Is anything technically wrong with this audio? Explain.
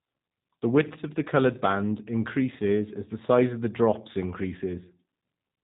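Yes. Throughout the speech there is G.729 codec damage, which fits an 8 kbit/s stream: the voice is rebuilt from a vocal tract filter and a few pulses per frame, so it sounds rough and synthetic, with nothing above 3.8 kHz. Unlike a simple low-pass filter, the buzzy, resynthesised texture shows codec modelling, not just lost treble.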